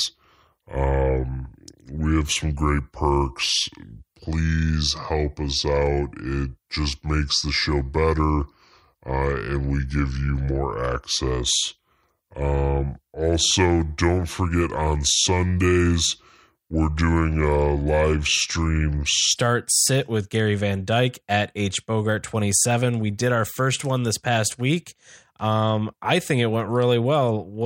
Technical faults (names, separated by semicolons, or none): section at the wrong speed